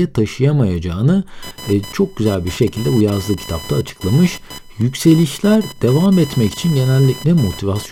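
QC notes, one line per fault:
1.42–7.92 s, computer activity noise: shifting processor or peripheral load disturbs the ground shared with the audio circuit, injecting a buzzing, chirping whine pulsing at around 1 kHz, roughly 20 dB below the speech, that tracks the machine's activity rather than the talker.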